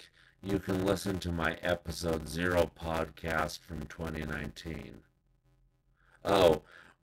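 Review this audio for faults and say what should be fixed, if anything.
Throughout, a block size mismatch (padded) leaves part of every block silent. This produces an 86.1 Hz buzz, which fits a 512-sample read block, and slows the speech to 0.625 times normal speed. Unlike a sample-rate mismatch, the timbre stays the same. Set both stages to the same block size.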